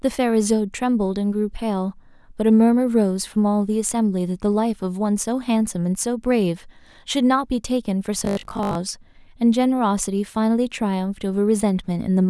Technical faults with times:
8.19-8.77 robotic sound from repeated short buffers

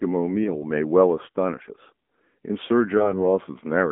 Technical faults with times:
0.00-3.91 channel delay (comb filtering)
0.00-3.91 AMR narrowband mobile codec
0.44-0.50 lost AMR speech frames
2.98-3.21 lost AMR speech frames

